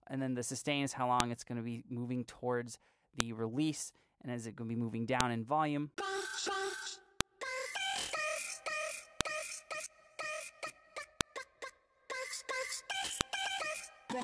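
Separate WAV pieces, each about 2 seconds long, were joined without stripping their file headers, so those header bytes are played back as if they were sound. The result is a file header played as audio: a sharp, loud click at the start of every piece, regardless of what the signal is doing. The clicks fall at 1.20, 3.20, 5.21, 7.21, 9.21, 11.21 and 13.21 s, spaced by the 2-second piece length.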